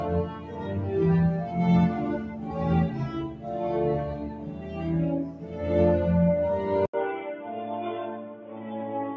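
It's a music clip, and a speech-style noise suppressor has been left running over the whole thing, so held parts and tails keep getting mistaken for noise and pulled down, giving a pumping level that swings by roughly 10 dB. You can hear the sound cut by the noise suppressor most clearly at 4.29–4.78 s, 5.3–5.54 s and 8.15–8.73 s, where sustained material sinks by about 5 dB while the attacks still punch through. Then at 6.86 s there's an 80 ms gap, and from there to the end everything goes dull and boxy, narrower than the 8 kHz the call path had been reaching. The level drops by about 5 dB and a new noise floor sits about 40 dB under the music. That's likely the input switched to a poorer device.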